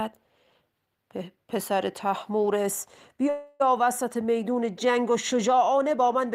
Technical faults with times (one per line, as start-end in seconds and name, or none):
3.29-3.62 call audio freeze